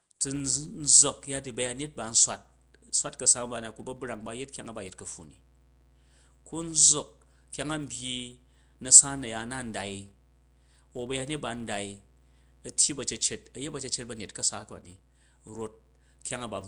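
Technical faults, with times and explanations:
Throughout: Nellymoser compression. Rough, hissy halo and smeared, underwater speech, likely from Nellymoser Asao coding, consistent with about 44 kbps.
Throughout: filter restarted on every block. A steady 200 Hz buzz tracks the speech level because each block starts from silence and opens with a small transient.
1.05–16.68 s: mains hum. A constant 60 Hz tone roughly 30 dB below the speech, from power-line coupling such as a ground loop or nearby transformer.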